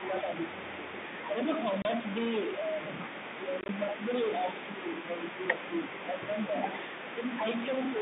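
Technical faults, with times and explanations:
Throughout, stuck bit: distortion over the speech with a noise floor in the pauses, likely from one data bit held fixed by a faulty line or converter.
0.00 to 7.47 s, speech suppressed in double talk: the talker dips by up to about 10 dB across nearly all of this stretch, likely the echo canceller turning down both sides during overlap.
7.92 to 8.02 s, speech suppressed in double talk: a brief further dip of about 5 dB at the very end, again likely the canceller reacting to simultaneous talk.
1.82 to 1.85 s, packet loss filled with silence: a 30 ms hard-edged hole, consistent with three consecutive packets dropped and replaced by silence.
3.61 to 3.69 s, packet loss filled with silence: 50 ms of silence scattered over 80 ms in short gaps of at most 20 ms, giving a chopped stretch of speech.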